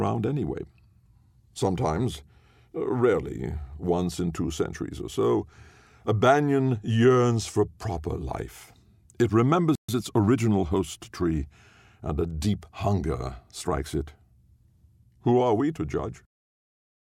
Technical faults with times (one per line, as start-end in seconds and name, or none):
9.75-9.89 playback stall
9.89-10.41 time-compressed catch-up